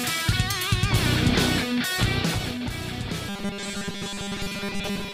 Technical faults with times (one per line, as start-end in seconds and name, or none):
3.29-5.13 robotic sound from repeated short buffers